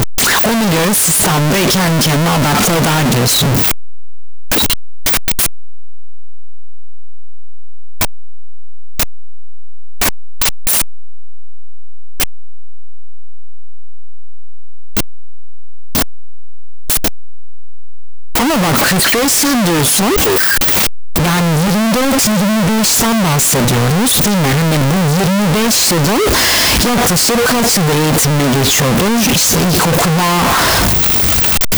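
From the first moment to the end, the speech comes through as a wall of harsh, clipped-sounding distortion, and the pauses are as loud as the talking. That's the classic sound of signed and unsigned mixed up, likely with 16-bit samples read with the wrong signedness. Flipping the top bit turns every zero crossing into a full-scale jump, so the quietest moments end up slamming between the extremes of the range.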